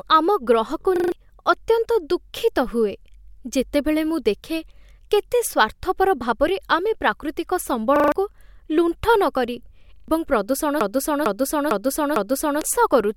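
At 0.96 s, just after "ଆମ ଗ୍ରହକୁ", a repeated buffer occurs. The same 40 ms slice plays four extra times before the audio moves on, so new audio wasn't delivered in time and the device replayed what it held. It sounds like a quick stuttering buzz lasting until 1.12 s, with roughly 150 ms of speech lost. On a waveform, identical short blocks sit side by side with abrupt joins. The spectrogram shows thin vertical seams at each join.

The same fault returns at 7.96 s after "ଭାବରେ ଆମେ ପ୍ରାକୃତିକ", again as four extra plays of a 40 ms piece, ending at 8.12 s. It returns once more at 9.96 s, this time as three extra plays ending at 10.08 s, with about 100 ms missing.

From 10.81 to 12.61 s, after "କରି ଏବଂ", a broken-record loop takes over. A 0.45 s fragment repeats exactly four times back to back, likely because the stream stalled and kept resending its last fragment. The speech meant for that stretch never appears. 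A spectrogram shows the same pattern tiled at 0.45 s intervals, and the waveform shows an identical envelope recurring.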